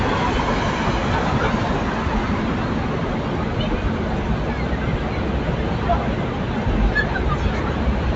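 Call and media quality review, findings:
No call and media quality findings: the audio reaches up to 8 kHz, matching the call path's bandwidth.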